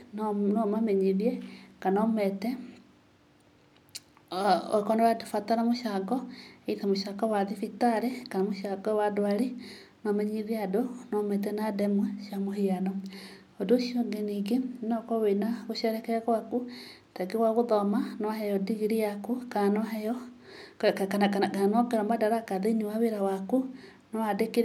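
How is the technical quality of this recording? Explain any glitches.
The recording has no audible technical faults, and the signal stays continuous and steady throughout.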